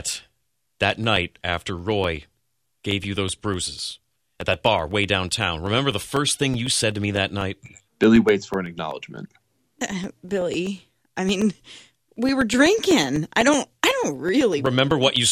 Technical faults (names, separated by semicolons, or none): periodic USB or driver dropouts